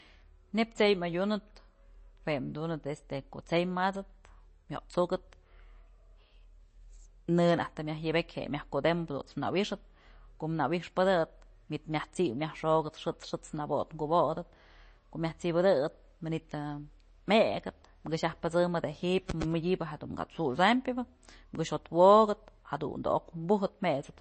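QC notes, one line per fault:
Throughout: MP3 compression, plainly audible on the speech. Nothing comes through above 8.3 kHz, where the encoder chopped the treble, and weak frequency lines flicker frame to frame for a watery, swirly edge. The cause is likely a starved encode that sounds like roughly 32 kbps.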